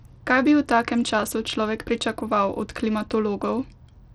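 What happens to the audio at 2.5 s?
At 2.5 s the speech carries the same damage heard across the whole clip: treble that flickers in and out, with gritty noise and aliasing on top. This is likely Bluetooth SBC compression, its coarse sub-band bit allocation starving the upper bands, consistent with a bitrate near 80 kbps.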